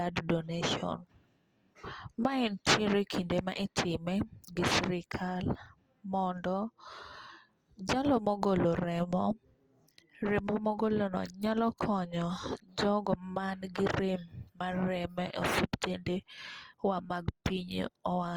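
The speech runs throughout through what is likely Opus compression in its music mode, starved of bits at a rate that points to about 24 kbps. The encoder keeps each band's energy but, lacking bits for detail, fills bands by folding lower content upward or with noise, while keeping the full bandwidth. The result is plainly audible: tonal parts of the speech turn rough, grainy and noisy rather than swirling, from start to finish.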